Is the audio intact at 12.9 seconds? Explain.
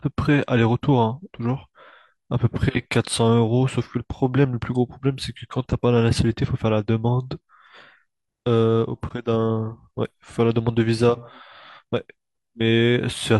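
Yes, the audio is intact at 12.9 seconds, with no fault at that moment.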